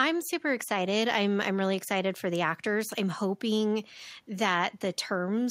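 No technical faults can be heard anywhere in the recording.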